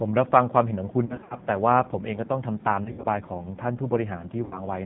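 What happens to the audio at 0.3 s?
At 0.3 s the speech is passing through a G.729 codec for the whole clip. It rebuilds the speech from a vocal tract filter, a pitch predictor and sparse pulses, which fits an 8 kbit/s stream. The result is a plainly rough, synthetic speech sound with nothing above 4 kHz.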